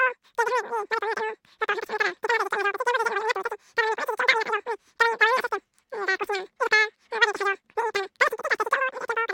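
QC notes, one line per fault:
throughout, wrong sample rate: the speech runs three times too fast and sits about 19 semitones high, chipmunk-style, because the samples are being clocked out at triple the rate they were captured at with no conversion, which fits 16 kHz audio played back at 48 kHz.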